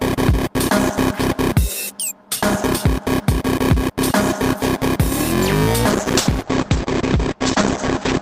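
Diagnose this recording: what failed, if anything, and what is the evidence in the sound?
What failed is a call bitrate drop at the codec stage, starting at 5.92 s and running to the end of the clip. From there the top end collapses: content that reached up to 20 kHz is now cut off at 8 kHz, so the sound goes muffled and rough and watery for the last 2.2 s. That fits the bandwidth estimate falling and Opus being squeezed from about 48 kbps to roughly 9 kbps, and it never recovers before the clip ends.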